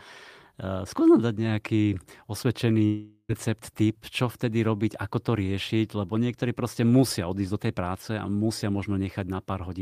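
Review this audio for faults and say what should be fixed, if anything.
At 2.85 s the speech cuts out and the last sound gets stretched into a buzzy tail that fades away over roughly 0.44 s. There's a brief silence of about 50 ms before speech picks up again at 3.31 s, with about 0.44 s of it simply gone. That's a long network dropout, likely packets that never arrived, leaving the receiver to paper over the gap. A steadier connection plus forward error correction or redundant packets would keep this from happening.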